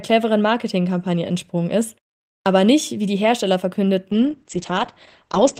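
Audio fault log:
2.40–2.46 s, clipped start after a pause: after a pause of about half a second following "entsprungen ist", the speech resumes abruptly with its opening sounds missing, so "nicht wie die" seems to begin mid-syllable. Roughly 59 ms is swallowed because the output device had gone idle during the silence and needed that long to wake and lock again before passing audio.
4.12–5.60 s, call bitrate drop: the last stretch of speech turns dull, rough and watery, and it stays that way to the end of the clip. The call's bandwidth estimate fell, pushing the encoder from 32 kbps down to 9 kbps for the final 1.48 s. At that rate Opus codes the speech more coarsely and narrows the audio band from 20 kHz to 8 kHz, removing the upper frequencies that carry crispness.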